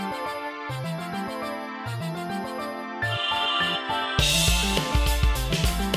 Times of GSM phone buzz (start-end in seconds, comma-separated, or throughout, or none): none